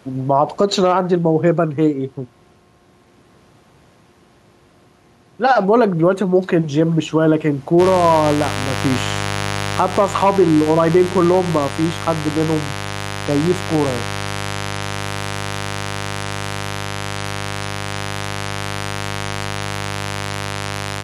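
From the start, the gain swings by about 5 dB, a pumping effect that leaves the speech squashed. This is gain pumping, likely from gain set too high with a fast limiter or compressor pulling it down on every peak.

At 7.77 s a steady, raspy buzz appears and stays to the end, sitting about 10 dB below the speech. This is mains buzz: sharp switching spikes at 50 Hz, twice per cycle, from a dimmer, rectifier or missing shield, with harmonics reaching up into the kilohertz range.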